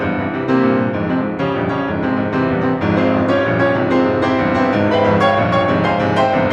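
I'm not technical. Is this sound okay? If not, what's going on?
Yes, this music sounds technically sound, with no audible faults anywhere in the recording.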